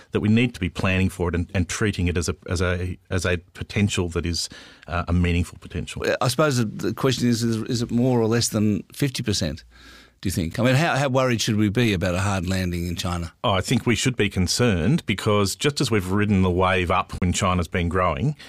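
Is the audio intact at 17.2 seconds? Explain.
No: right after "ridden the wave up", a 35 ms block of digital silence (17.18–17.22 s) cuts the speech abruptly, appearing as a flat waveform gap and a blank spectrogram column.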